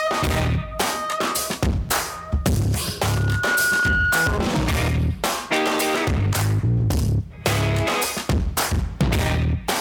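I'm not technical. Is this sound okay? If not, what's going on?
No. From about 3.02 to 4.46 seconds there is a loudspeaker feedback squeal. A microphone is picking up the speaker it feeds, and the sound circles round and round, growing each lap. You hear one high, piercing tone near 1.4 kHz that swells over roughly half a second until it is louder than the rest of the sound, then stops. That swelling is what separates feedback from a steady hum or whistle, which would stay level throughout.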